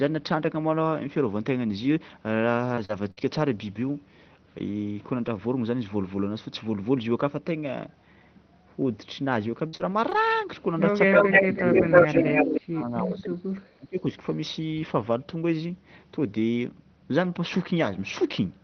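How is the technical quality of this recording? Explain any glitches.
The recording has three kinds of call-related fault, clustered mainly between 2 and 14 seconds.

Repeated packet loss (robotic sound) occurs at 2.09–3.19 s and again at 9.67–10.33 s. Each stretch has three gaps, the longest about 60 ms, totalling 120 ms and 100 ms missing. Concealment extends the preceding audio across each hole, giving a choppy sound with pieces missing.

Speech suppressed in double talk appears at 10.94–12.25 s, dipping about 10 dB over roughly half a second, then at 12.44–14.11 s, dropping about 25 dB across around a second and a half. The likely cause is the echo canceller attenuating the talker while both sides spoke, turning the speech down.

Echo leak is audible at 11.13–12.60 s: a delayed copy of the speech arrives about 298 ms late, roughly 10 dB below the direct sound. It is likely residual loudspeaker pickup that the far-end echo canceller failed to remove, heard as a delayed repetition overlapping the suppression.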